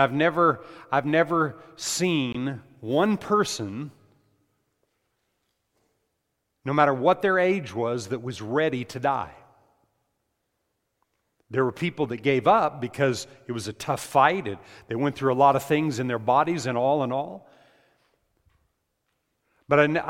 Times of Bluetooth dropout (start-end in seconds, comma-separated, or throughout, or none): 2.32-2.35